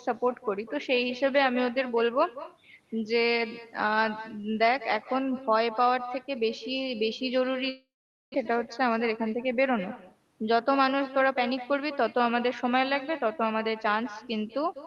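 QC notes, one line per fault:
QC notes, one line per fault:
Throughout: echo with no canceller. Every phrase is trailed by a second copy arriving roughly a fifth of a second later, about 15 dB quieter and thinner than the direct sound. That pattern points to the far end playing the call over a loudspeaker, its microphone picking it up, and nothing removing it before it returns across the network. The 12 kHz Opus band limit applies to the whole call.
7.69–8.48 s: long network dropout, the likely cause of this gap. The sound stops being real at 7.69 s. The last fragment is stretched into a decaying buzz that fades out, followed by a stretch of near-silence of roughly 460 ms. About 0.6 s of the original never plays, and the sound resumes further along at 8.48 s. The receive delay shifts by a few tens of milliseconds across the gap.
8.94–9.35 s: jitter buffer speed-up. Over these 0.41 s the audio runs at about 110% of normal speed with unchanged pitch, so the delivery sounds briefly hurried. 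The receiver is draining excess buffered audio, cutting out short pitch-period-sized slices one after another. Roughly 50 ms is removed in total, shortening the timeline without any audible pitch shift.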